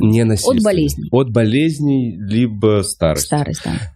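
A single compressed frame of this speech clip is dropped at 1.12 s and again at 2.87 s, either missing from the file or rejected by the decoder as damaged. These are compressed frames skipped: each time the audio jumps ahead by one 21.3 ms frame.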